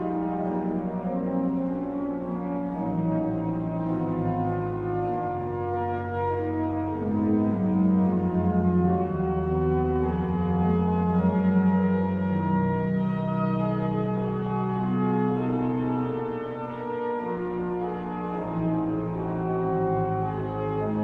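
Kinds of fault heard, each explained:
No kinds of fault are heard in this clip.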